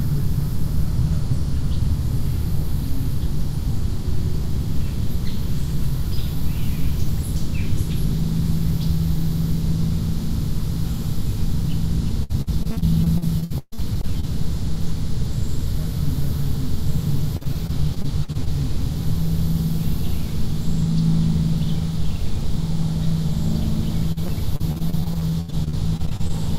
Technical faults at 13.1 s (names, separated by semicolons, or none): repeated packet loss (robotic sound)